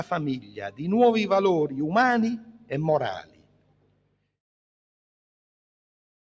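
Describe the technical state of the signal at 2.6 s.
At 2.6 s the sound sinks, dipping by about 11 dB between 2.38 and 2.71 s, so sustained parts thin out while sharper onsets still get through. This is sound cut by the noise suppressor: it mistook the steady content for noise and pulled it down harder than the rest.

That dip sits inside a wider problem: a noise suppressor applied to music or sounds stays engaged across the whole clip. It keeps treating held tones, ambience and decaying tails as noise, pushing them down by something like 10 dB at a time, which gives a pumping, fluttering level.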